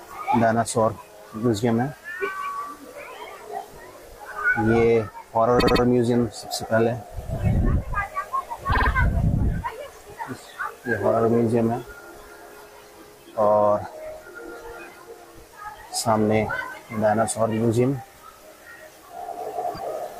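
Repeated frames stutter the audio at 5.58–5.81 s, 8.71–8.88 s and 19.74–19.79 s: short compressed blocks of about 78, 52 and 26 ms replay.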